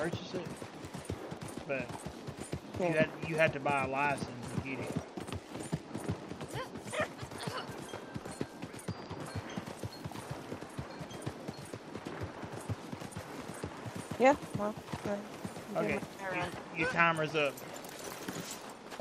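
Nothing in the audio stood out as a technical problem on listening.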